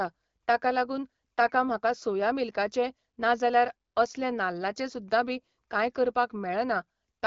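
No technical faults can be heard anywhere in the speech. It comes through the AMR wideband (HD Voice) codec at 12.65 kbit/s, which leaves the speech clear with only a light coding texture and a top band reaching to about 7 kHz.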